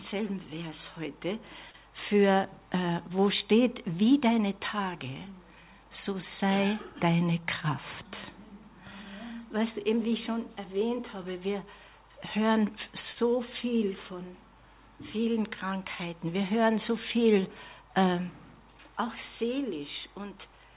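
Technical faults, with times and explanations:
1.70 to 1.77 s and 13.13 to 13.19 s, short stall from a late packet: the sound briefly hangs, with one moment held too long and a faint buzzy dip, lasting 41 ms the first time and 28 ms the second. A packet arrived late, the jitter buffer ran dry, and the receiver stretched the last audio until the packet arrived, then resumed from the same point. Nothing is lost, but playback ends up 41 and then 28 ms further behind.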